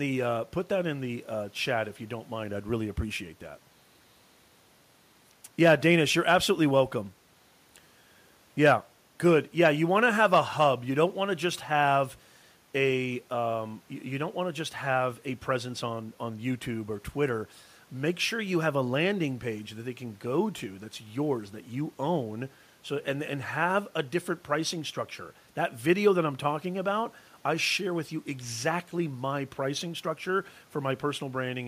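The speech comes through with no technical faults; the only background is the room's own noise, sitting about 36 dB below the speech.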